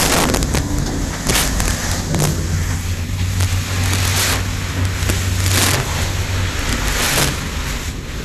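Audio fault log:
Throughout, integer overflow: loud peaks pushed about 10 dB past full scale wrap to the opposite sign instead of limiting, so a small share of samples snaps into harsh cracks.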